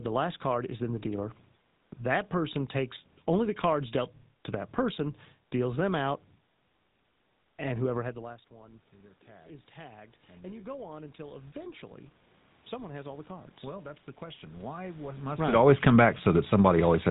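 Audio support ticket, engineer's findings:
Buzzy, gravelly roughness on the speech throughout, nothing above 3.8 kHz. GSM full-rate codec in path, consistent with 13 kbps; pulse-driven vocal-tract model discards fine excitation detail.

Voice and room noise swell together 8.14–11.94 s, after "and whoever had", about 10 dB. Automatic gain rising; AGC compensating after the input dropped about 22 dB when the talker moved back.

Second slow swell 12.69–15.35 s, ending just before "right it always come", about 6 dB. Automatic gain rising again; AGC still climbing toward target level.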